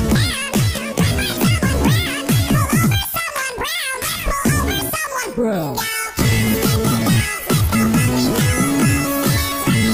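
No technical faults can be heard anywhere in the clip. Nothing in the audio calls for a timestamp or further comment.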